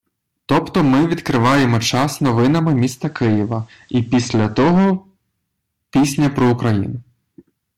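Hard clipping runs through the whole speech clip. The signal is driven about 14 dB past what a stage can pass, so roughly a tenth of the samples have their peaks cut flat. Those flat tops add high harmonics. Every loud syllable carries a harsh fuzz.

From 2.90 s to 4.95 s, the audio shows digital radio blending to analogue. The receiver lost its digital stream and cross-faded over 187 ms to the FM broadcast. Hiss rises to some 40 dB below the signal. Level holds steady.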